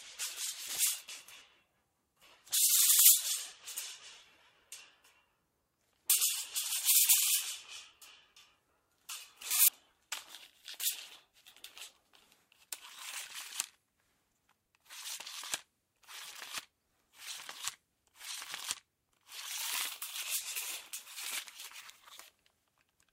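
It's a recording of sounds, and there are three short glitches from damaged data in a compressed stream, at 3.79 to 3.82 s, 6.10 to 6.13 s and 9.68 to 9.71 s. Each one is a quick glitch of about 30 ms. Some bytes in the encoded file were corrupted, so the decoder misread those frames, lost sync, and had to hunt for the next valid frame header before playback could recover.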